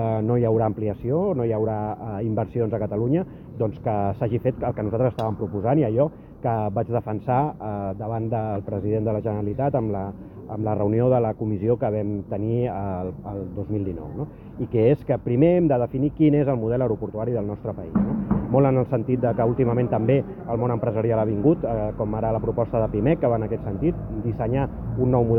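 No technical faults can be heard anywhere in the clip. The audio holds steady from its first moment to its last.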